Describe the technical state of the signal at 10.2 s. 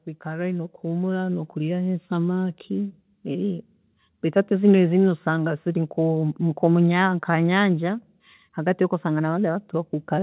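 At 10.2 s the speech is intact, with only the band limit of the call path audible, nothing above 4 kHz, which fits a G.711 mu-law call path.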